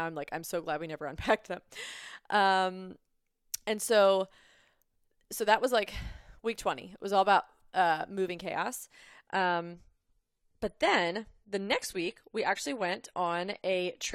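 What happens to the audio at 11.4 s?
At 11.4 s the speech is inside a stretch where the adaptive stream has dropped to a lower bitrate, running from 9.27 s to the end of the clip. The player switched to a leaner version of the same stream, and the change in sound points to roughly 96 down to 32 kbit/s. Nothing above 13.5 kHz survives, so the treble dulls and coding artefacts thicken. Unlike a dropout or packet loss, the switch is abrupt but seamless, with no gap or skipped audio.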